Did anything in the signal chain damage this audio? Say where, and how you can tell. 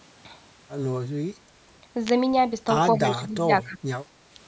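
Yes. In the analogue wiring, a nearby switch or discharge likely coupled a brief arc into the line: an electrical switching spike, heard as a sharp snap from 2.07 to 2.09 s.

In call processing, the echo canceller likely misjudged double talk and suppressed speech from 2.98 to 3.79 s, dipping it by roughly 15 dB in pieces totalling about 0.7 s.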